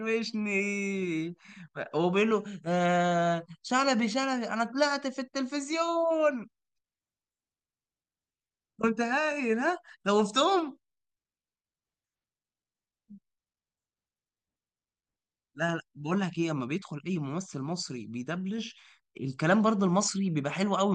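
Nothing technically wrong turns up anywhere in this speech recording, so there are no problem spots to point to and no causes to explain.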